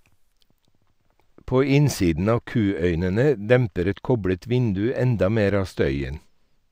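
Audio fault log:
0.33–6.72 s, channel delay (comb filtering): one channel runs roughly two samples behind the other, a lag of only a few hundredths of a millisecond, and the mono sum cancels where the two copies fall out of phase. The first notch sits around 10 kHz, so the speech loses its top sparkle and sounds dull. On a spectrogram, a fixed dark horizontal band near 10 kHz persists from onset to end.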